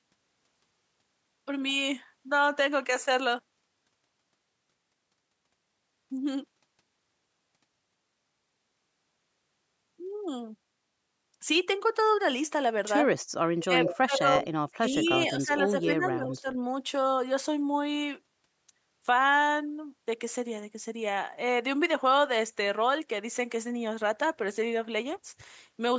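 From 13.3 to 15.5 s the speech dips hard, in places by something like 30 dB, for about a second in total. That's likely speech suppressed in double talk: with both sides talking, the echo canceller couldn't separate this talker from the far end and pulled everything down. At 13.59–14.46 s you also get an echo leak, a copy of the voice trailing 162 ms behind and only a little quieter, likely residue the canceller failed to remove from the loudspeaker pickup. A fainter scrap of that same 162 ms echo shows up at 15.02–15.07 s. Then at 15.84–16.48 s the speech gets turned down again, more gently this time, roughly 10 dB over about half a second.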